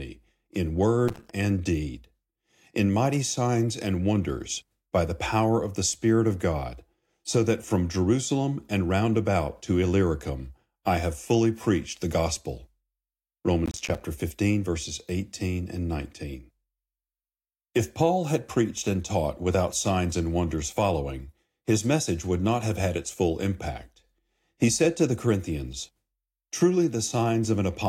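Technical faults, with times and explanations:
1.08–1.34 s and 13.66–14.01 s, processor overload crackle: in both bursts the processor misses its deadlines over and over, so short blocks come out as hard-edged silent gaps. This sounds like gritty tearing, and the first burst ends just before "and deed". The gaps point to buffers of around 5 ms. A waveform shows rapid dropouts chopping the signal, and a spectrogram shows broadband vertical streaks from each abrupt edge.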